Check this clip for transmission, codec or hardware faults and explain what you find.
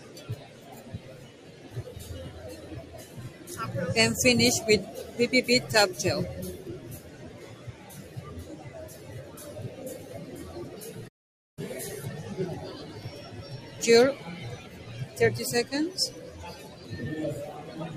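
Three faults are present: a speech-style noise suppressor left running across the whole clip, four places where it pulls the sound down further, and one brief dead-silent gap.

The noise suppressor applied to music or sounds is audible throughout as a pumping, thinned quality, with level swinging by around 10 dB. It was built for speech, so it treats sustained tones, ambience and decays as noise and turns them down while letting sharp onsets through.

Sound cut by the noise suppressor occurs from 0.0 to 1.7 s (about 6 dB deepest drop), 3.07 to 3.44 s (about 5 dB), 6.99 to 7.89 s (about 6 dB) and 16.69 to 16.86 s (about 5 dB). Held material sinks and tails are clipped short as the suppressor clamps down hardest on sound it misreads as noise.

An audio dropout to silence runs from 11.08 to 11.58 s, about 490 ms of silence with no room tone, cutting in and out abruptly. The likely cause is lost input, such as a disconnection, link failure or mute, while recording continued writing silence.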